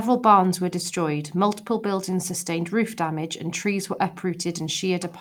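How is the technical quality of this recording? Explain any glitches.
The recording holds steady throughout, with no dropouts, distortion or other technical glitches to be heard anywhere in the speech.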